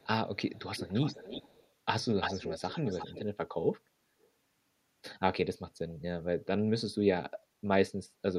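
A faint echo leak opens the speech at 0.0–0.07 s, delayed about 381 ms and very quiet. It returns at 0.53–1.68 s and, stronger at roughly 10 dB under the speech, at 2.2–3.24 s, then as a barely audible scrap at 4.21–4.29 s, each about 341 ms behind. The likely cause is a far-end loudspeaker whose echo canceller let its microphone pickup through. A spectrogram shows fainter duplicate formant patterns shifted right; the waveform shows smeared tails.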